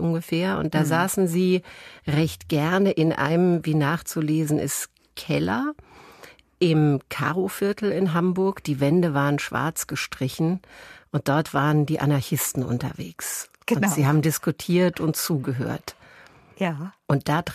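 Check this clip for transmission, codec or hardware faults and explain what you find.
No faults turn up anywhere in this speech recording. There is nothing to flag at any point in it.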